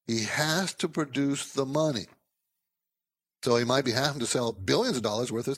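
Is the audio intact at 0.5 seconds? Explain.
Yes, the speech at 0.5 seconds is intact, with no audible fault at that moment.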